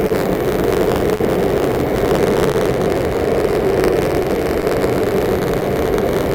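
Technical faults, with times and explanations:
Throughout: clock drift between sender and receiver. The sending side's clock runs roughly 3 percent slow, so the receiver's jitter buffer keeps draining and must repeat short pieces. The result is small timing hiccups scattered unevenly across the whole clip. Unlike the isolated stall or the clustered gaps below, these slips never stop and have no single cause point.
Throughout: buffer tearing. Writer and reader of the playback ring buffer have slipped out of step and cross inside every period. A small slice, around 4 percent of each buffer, holds audio from about 40 ms earlier, hard-joined on both sides. This produces a steady rattle at 93.8 Hz, which fits a 512-sample buffer at 48 kHz. It appears only while sound is present and never as isolated clicks.
2.51 to 2.55 s: short stall from a late packet. A packet arrived late, the jitter buffer emptied, and the receiver stretched the last sound for 28 ms until the data came. 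Playback then resumed where it left off, so nothing is lost. Instead a moment is held too long, with a slight buzz or dip, and everything afterwards sits 28 ms later. That single held sound distinguishes it from the drift's recurring slips.
3.51 to 6.03 s: scattered short gaps. Roughly seven lost or late packets, spread through this stretch, were each patched by continuing the preceding sound. In total about 70 ms was filled, with the longest patch around 15 ms, covering only about 3 percent of the span. They are heard as brief ticks and smears confined to this window. Each is shorter and more frequent than the single held stall earlier.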